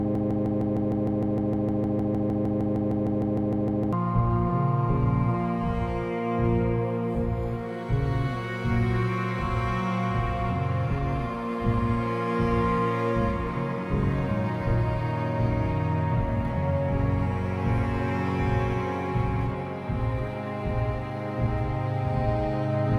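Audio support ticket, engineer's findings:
Broken-record loop, 0.0–3.93 s, already under way when the clip opens. A fragment of about 153 ms repeats exactly, back to back, roughly 25 times. Likely a stalled player, encoder or stream resending its last held fragment. The audio for that span is lost.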